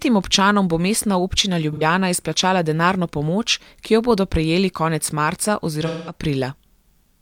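Two dropouts in this speech, both AAC frame loss with concealment. Around 1.73 to 1.82 s, just before "izplačala denarno pomoč ki", roughly 85 ms goes missing, which fits two lost frames. The decoder patches it from the last good spectrum, so you get a brief smeared, noisy blur. At 5.86 to 6.16 s, right after "bodo prejeli konec marca", a longer gap of about 213 ms starts the same way, then sags towards silence before fading back in.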